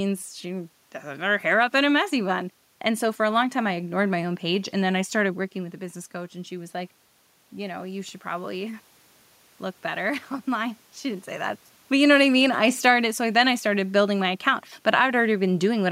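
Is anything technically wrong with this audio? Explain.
Yes, there is one fault. From 5.54 to 8.90 s there is automatic gain rising. Just before it, the talker moves away at around 5.5 s and the input level drops by about 9 dB. The automatic gain control treats this as too quiet a signal. It raises its gain slowly, by about 4 dB across those three seconds. The voice and the room noise swell up together. The level creeps upward instead of settling at once.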